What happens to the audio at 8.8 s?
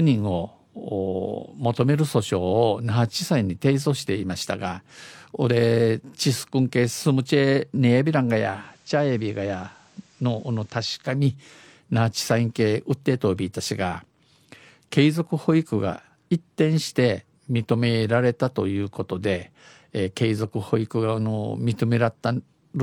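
At 8.8 s the speech sits inside a digital radio blend to analogue, spanning 8.34 to 11.25 s. The receiver lost the digital stream and cross-faded over 427 ms to FM. Level falls about 3 dB, and hiss appears roughly 35 dB down.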